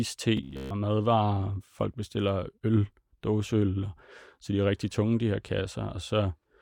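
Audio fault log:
0.37 to 0.70 s, robotic sound from repeated short buffers: the speech turns into a stiff, metallic buzz fixed at 66.8 Hz that only loosely follows the words. The likely cause is playback repeating a chunk of about 15 ms whenever new audio arrived late, which replaced most of the real signal here.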